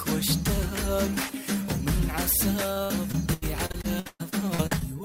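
A stretch of repeated packet loss (robotic sound) runs from 2.73 s to 4.82 s, near the end of the clip. About a dozen dropouts arrive in quick succession. Each is partly bridged by extending the preceding sound, so roughly 27% of the span is concealed fill and about 0.56 s is simply missing. That mix gives a choppy texture with pieces missing, with the longest hole lasting 120 ms. On a spectrogram, the fill shows as smeared, repeated frames with frozen harmonics, broken by sharp vertical edges. The waveform shows abrupt, flattened sections there.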